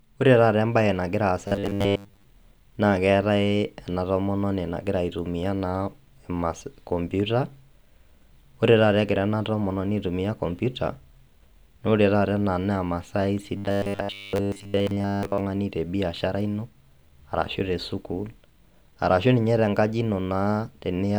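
Speech clip with robotic sound from repeated short buffers, from 1.48 to 2.24 s and again from 13.57 to 15.40 s. The voice goes to a stiff, metallic 100 Hz buzz, likely from a roughly 10 ms chunk being replayed for most of each stretch while fresh audio gets skipped.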